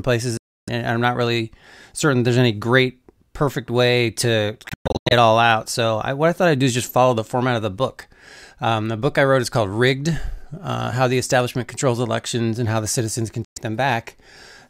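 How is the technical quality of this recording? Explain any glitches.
The recording has three short gaps where the sound cuts out. The cause is likely a Bluetooth dropout.

At 0.37 to 0.69 s, just before "I'm not really certain", about 0.3 s of speech is missing. Between "great perfect way to" and "it all out", at 4.69 to 5.13 s, several brief holes are spread over about 0.42 s, the longest about 0.12 s. At 13.44 to 13.58 s, right after "how the citizens can", another 0.12 s vanishes.

Packets that reach the headphones too late are discarded, so the output falls silent. Playback then resumes at the point the sound would have reached, which means the lost stretch is skipped rather than delayed. Each gap is a sudden hole of silence, and the speech picks up later as if it had played on. In a waveform these are flat near-silent stretches with abrupt or briefly faded edges, and on a spectrogram they are vertical empty bands across all frequencies.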